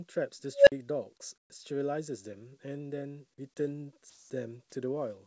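At 0.54 s an unstable filter takes over: a tone around 500 Hz swells over about 127 ms into a loud squeal, clips, then drops to 50 ms of silence as the output overflows and resets. Unlike a dropout, the loud build-up comes before the gap.

From 1.38 to 1.50 s, comfort noise replaces the background for 120 ms. The detailed room sound, which sits about 46 dB below the loudest passages, gives way to flat, featureless hiss about 18 dB quieter. This is likely the result of discontinuous transmission. Unlike a clipped word, no speech is lost.

From 4.10 to 4.30 s, sound is dropped by the voice detector. Over 200 ms, steady synthetic noise stands in where about 110 ms of real sound should be, likely because the detector mistook that sound for background. Here actual sound disappears, not just the background.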